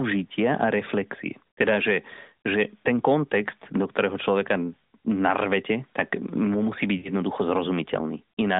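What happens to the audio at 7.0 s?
Right around there, from about 6.98 to 7.09 s, you get lost AMR speech frames. Roughly 60 ms of speech never made it through, which fits three 20 ms frames dropped in a row. The decoder covers the gap by repeating its last good pitch and vocal-tract settings while turning the gain down, so the speech smears out into a stretched, fading sound, then comes back a bit weak or rough. The narrowband phone-line sound carries on unchanged around it.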